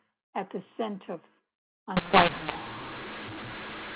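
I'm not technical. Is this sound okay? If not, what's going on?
No. The speech is clean telephone-quality audio until about 1.97 s. From there to the end it turns harsh and gritty, and the gaps between words fill with hiss. This is a mu-law and A-law mix-up: the call was packed using one telephone coding rule and unpacked with the other, so loud and soft moments get their volumes scrambled. Ordinary overload distortion only spoils the loudest parts, but here even the silences turn noisy.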